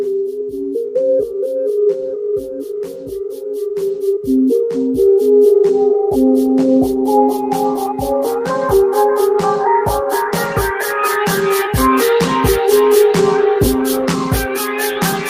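Nothing goes wrong anywhere in this one, so there's no technical fault to point to at any moment in the audio.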